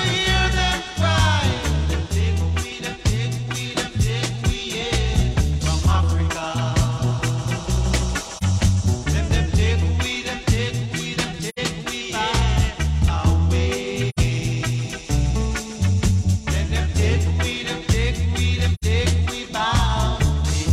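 AAC frame loss with muting occurs at 8.37 s, 11.49 s, 14.09 s and 18.74 s. Each time the decoder zeroed the missing spectrum, so the overlapping windows fade the sound down and back up rather than cutting it. The result is a brief dip where one frame is lost and a soft-edged hole where a run is lost. The first gap is about 43 ms, which fits one lost frame. The later three are about 85 ms each, consistent with two consecutive frames dropping out.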